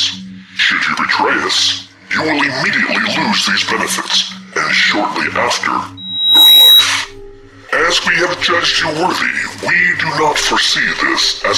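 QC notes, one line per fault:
5.97–6.90 s, loudspeaker feedback squeal: a microphone is picking up its own loudspeaker, and at 3.9 kHz the loop gain passes unity, so that single tone feeds on itself, swelling over about half a second to roughly 10 dB above the programme before stopping.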